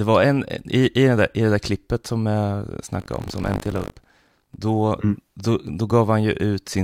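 Buffer tearing runs from 2.98 to 4.60 s, between "där klippet som jag" and "mm då". Playback has slipped against the ring buffer, so each period splices in a small slice of speech from about 70 ms earlier. The hard joins produce a robotic 50 Hz buzz.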